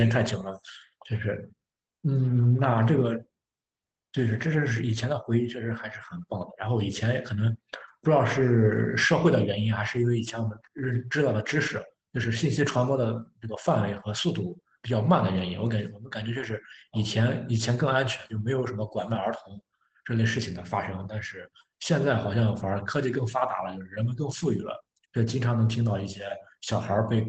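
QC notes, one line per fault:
16.37–16.43 s, lost packet rebuilt from error correction: a brief rough, noisy patch with no gap, because the decoder played low-bitrate backup copies carried in the following packets, which fits two lost packets.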